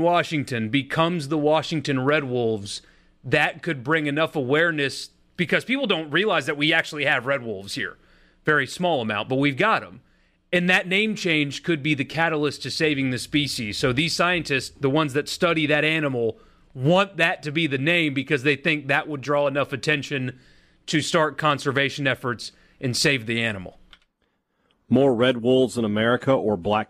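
No technical faults can be heard in this speech recording.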